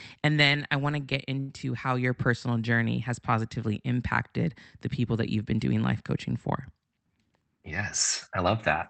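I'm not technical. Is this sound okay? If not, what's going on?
No. From 1.39 to 1.52 s, between "I want to get" and "how your personal journey", there's a short stall from a late packet: the sound is held for about a tenth of a second, then carries on with nothing lost.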